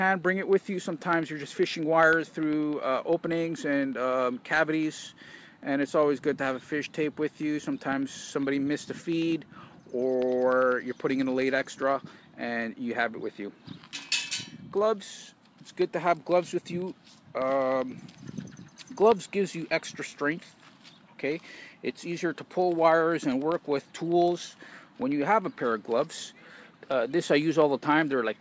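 From 0.13 s to the end, periodic USB or driver dropouts cut the audio every 0.1 s. Something stalls the bus or driver on a fixed cycle, and each stall leaves a brief gap of silence, heard as a steady tick ten times a second that sounds only while there is signal. The strict spacing sets it apart from network packet loss, whose gaps come irregularly. Above the ticks, nothing sounds over 8 kHz, the band limit of the G.722 call codec.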